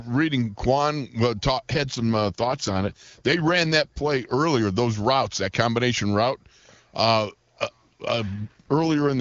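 From 1.74 to 4.34 s, starting just before "those routes that combination", and again from 8.34 s to the end, an AMR rate drop makes the speech rough and synthetic, which fits the codec falling from 23.85 to 8.85 kbit/s. Unlike packet loss, nothing drops out, and the bandwidth stays full.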